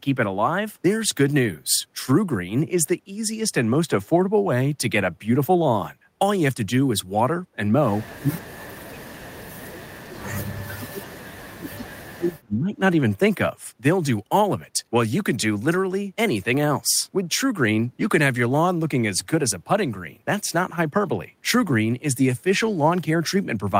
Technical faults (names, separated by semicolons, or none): speech suppressed in double talk